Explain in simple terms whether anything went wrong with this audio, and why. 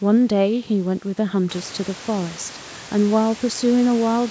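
Nothing went wrong here: the speech has simply passed through a call's microphone processing, which trims away the deepest bass and leaves nothing above 8 kHz, and the room's background noise gets louder from roughly 1.5 seconds but stays well beneath the speech, which is just the room itself rather than a problem with the system.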